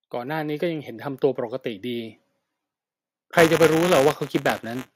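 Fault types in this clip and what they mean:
Automatic gain rising: between 0.13 and 0.95 s the level climbs by about 4 dB, speech and background swelling together, unlike a talker simply getting louder.
Buffer tearing: from 3.36 s to the end, a steady 188 Hz robotic rattle, which fits a 256-sample buffer, rides on the speech. A small slice of each buffer repeats audio from roughly 20 ms earlier. Unlike dropouts, there are no gaps, and the rattle stops when the speech does.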